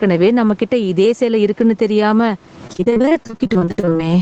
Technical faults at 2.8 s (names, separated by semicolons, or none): gain pumping; repeated packet loss (robotic sound)